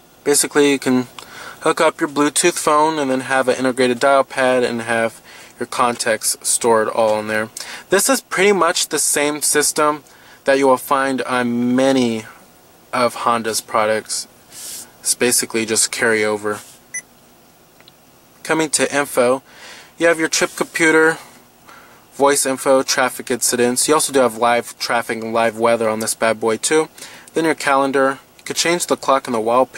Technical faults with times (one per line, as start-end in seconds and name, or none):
0.00-29.78 sample clock jitter